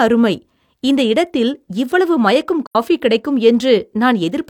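AAC frame loss with muting at 2.66 to 2.76 s: the speech fades into a brief silent gap and back out again. The decoder zeroed the missing spectrum, and the overlapping windows soften both edges, giving a hole of about 85 ms, which fits two lost frames.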